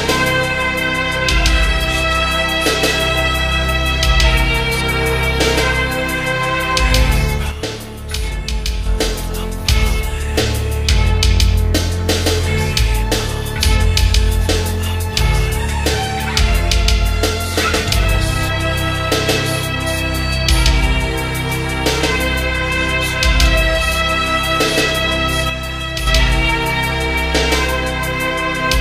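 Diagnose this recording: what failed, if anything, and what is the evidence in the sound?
The fault is one channel dropping out. The level falls abruptly by about 6 dB from 7.51 to 8.86 s, and again from 25.50 to 26.07 s. Both times it recovers just as suddenly. Material shared by both sides is still there, only quieter, because the mono sum is getting half its input. Anything carried on the missing side vanishes. The likely stage is analogue wiring, such as an intermittent cable or connector on one leg.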